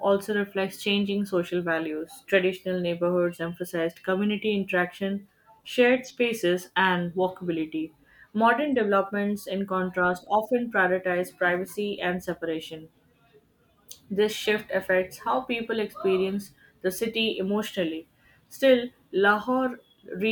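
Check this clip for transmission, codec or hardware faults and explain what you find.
Nothing in this speech recording points to a transmission, codec or hardware problem.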